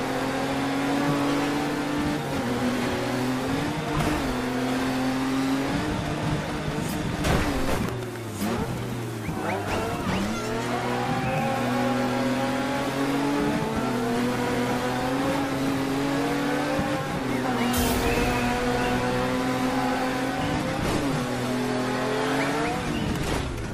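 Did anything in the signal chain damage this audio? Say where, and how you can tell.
Yes, at the codec and network stage. From 20.54 s to the end at 23.74 s, the stream drops to a lower bitrate. The top end suddenly disappears above 13.6 kHz, and codec artefacts thicken, with no gap at the switch. That's an adaptive player swapping in a cheaper rendition when throughput sagged. The narrower band and extra smearing fit AAC falling from something like 96 to 48 kbit/s.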